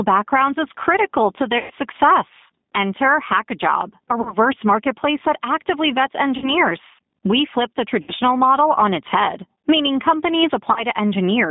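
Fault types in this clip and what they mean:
Gain pumping: The level swings by around 15 dB, ducking under each loud syllable and leaving a squashed level. The likely cause is gain set far too high with a fast limiter pulling it down.
G.729 codec: Everything sits between 200 Hz and 3.7 kHz, and the speech sounds rough and slightly synthetic throughout, which fits an 8 kbit/s model-based codec such as G.729A. Plain band-limiting would only dull the sound; this coding adds a gritty, artificial texture.
VoIP packet loss concealed by the speech codec: At 1.58, 4.21, 6.38, 8.02 and 10.72 s, roughly 120, 40, 40, 60 and 40 ms of audio go missing. Each gap is filled with stretched sound, a buzzy tone or coloured noise that fades, and the voice stays weak briefly afterwards, unlike a clean silent dropout.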